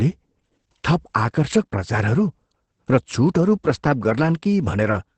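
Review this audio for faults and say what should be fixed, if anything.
Opus voice compression, start to end: SILK at what sounds like 10 kbps drops all above 8.6 kHz and coarsens excitation, leaving speech muffled and hoarse. To prevent it, encode at a higher Opus bitrate so the coder keeps the full band and finer excitation detail.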